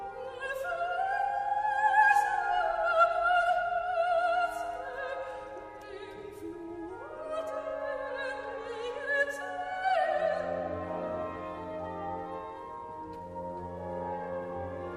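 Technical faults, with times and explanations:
12.27 to 12.36 s, DAB burbling: a brief burst of burbling lasting about 0.1 s. It sounds like a low rate of bit errors, around a tenth of a percent, slipping past the error correction into the MP2 audio stream. Corrupted samples put short noise blips into individual sub-bands and corrupted scale factors briefly throw sub-bands to wrong levels, and the span fits a few damaged frames. Those isolated blips and band jumps produce the burbling.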